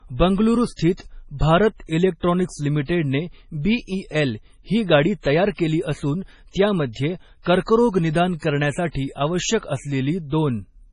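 MP3 compression runs throughout the speech, likely the cause of its watery, swirling texture. Nothing sounds above about 10.5 kHz, and heavy damage fits a bitrate near 24 kbps, where the encoder zeroes weak frequency lines that flicker between frames and smears consonant attacks.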